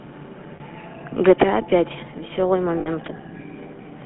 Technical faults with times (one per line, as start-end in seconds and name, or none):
0.00-4.06 GSM full-rate codec
0.56-0.61 lost GSM frames
2.80-2.88 lost GSM frames